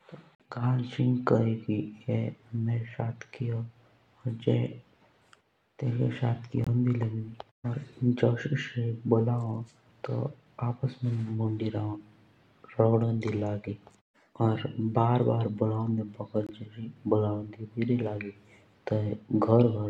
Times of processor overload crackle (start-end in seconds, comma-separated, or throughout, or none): none